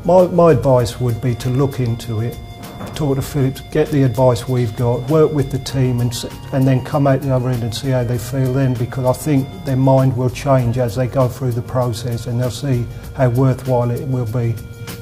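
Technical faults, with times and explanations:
Nothing stood out on listening to the clip.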